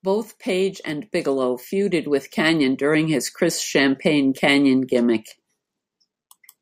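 Nothing technical goes wrong in this bit of speech; there's simply no fault to point to anywhere in it.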